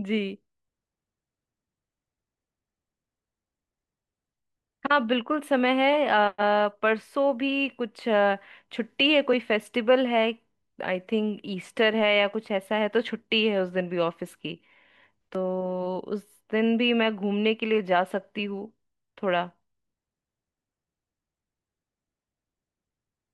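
Speech recording; no technical faults detected anywhere in it.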